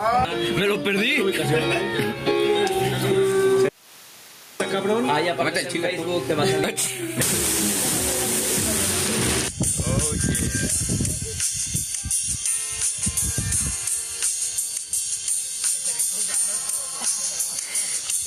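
From the start, gain pumping runs through the whole clip: the gain ducks by roughly 15 dB the moment a loud sound arrives. Gain set far too high, with a fast limiter clamping it, is the likely cause. The ducking under each loud sound distinguishes it from steady noise or simple clipping.

At 3.69 s an audio dropout to a faint residue begins, lasting about 0.91 s until 4.60 s. The signal cuts off abruptly, leaving only hiss about 40 dB below normal level, most likely because the input was lost while the path after it stayed live. The cut-off and the return are both sudden, unlike a natural pause or fade.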